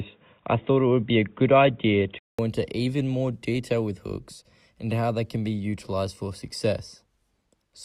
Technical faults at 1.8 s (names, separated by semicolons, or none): input switched to a poorer device